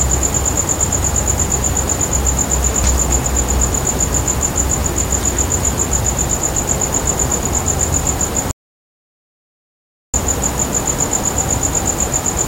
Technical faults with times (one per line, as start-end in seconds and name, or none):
8.51-10.14 rebuffering stall